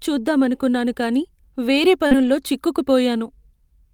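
A speech recording with a short concealed packet loss right after "చూద్దామనుకున్నాను కానీ వేరే", from 2.07 to 2.13 s. About 40 ms of audio never arrived, and the receiver covered roughly 35 ms of that by extending the preceding sound before blending back in. It is heard as a quick smear or wobble. Overlapping it, from 2.11 to 2.29 s, is a lost packet rebuilt from error correction. The pattern points to five separate packets, around 100 ms in total, replaced by the low-bitrate redundant copies that each following packet carries, so there is no silence. That section sounds rougher and noisier than its surroundings. On a spectrogram it appears as a band of coarser, smudged harmonic detail with a raised noise floor.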